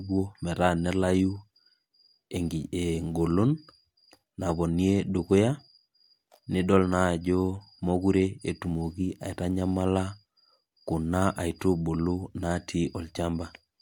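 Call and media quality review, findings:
No faults found in the transmission path or capture chain; the speech signal arrives intact with no technical defects to report.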